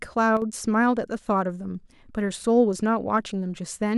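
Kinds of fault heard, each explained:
One channel drops out: one stereo channel likely cuts out for 50 ms, so the mono-summed speech dips abruptly by about 6 dB from 0.37 to 0.42 s.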